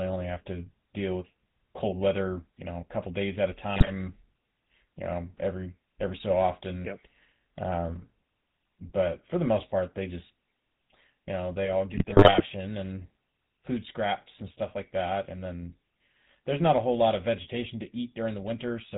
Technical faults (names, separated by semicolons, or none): GSM full-rate codec; GSM bit errors